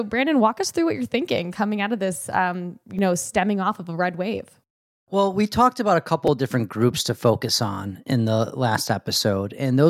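At 2.99 s, between "of this um you" and "know stemming off of", a repeated buffer sounds as a brief click: new audio arrived late, so one roughly 5 ms block, which fits a 256-sample buffer, played twice. At 6.27 s, after "we talked about a", a block of the same size played three times, giving a slightly longer buzzy tick. The waveform shows identical copies butted together with hard joins, and the spectrogram shows a thin vertical stripe at each join.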